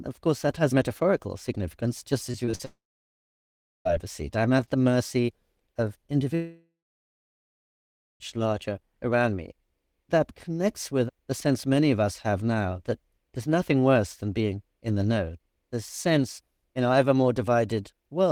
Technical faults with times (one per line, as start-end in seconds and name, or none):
2.31-2.61 repeated packet loss (robotic sound)
2.65-3.87 long network dropout
6.35-8.22 long network dropout